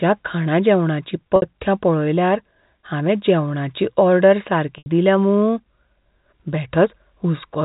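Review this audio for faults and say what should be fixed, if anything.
Packet loss with pitch repetition occurs at 1.36 to 1.42 s, just before "पळयल्यार हावें जेवणाची ऑर्डर", and at 4.78 to 4.86 s, just before "दिल्या मूं". In each, the receiver repeats the last pitch period across a 60 ms and an 80 ms gap, heard as a held buzz fading into silence before speech returns with a short cross-fade. The gap lengths fit three and four lost 20 ms packets. Enabling forward error correction or packet redundancy, with a suitably sized jitter buffer, would prevent it. The G.711 telephone band carries the rest with at most faint coding damage.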